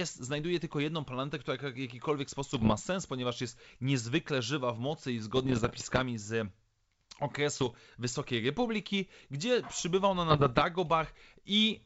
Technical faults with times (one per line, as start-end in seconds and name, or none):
2.50-2.73 bit errors on an ADPCM link
5.36-6.03 bit errors on an ADPCM link
7.57-7.78 bit errors on an ADPCM link
10.29-10.62 bit errors on an ADPCM link